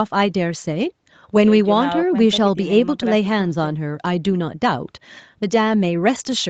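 No faults: the speech has been through call microphone processing, which limits it to 8 kHz and rolls off the lowest bass, both normal for that path.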